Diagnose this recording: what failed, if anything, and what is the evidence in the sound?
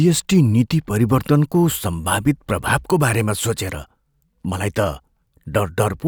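Nothing in the speech stood out as faulty on listening.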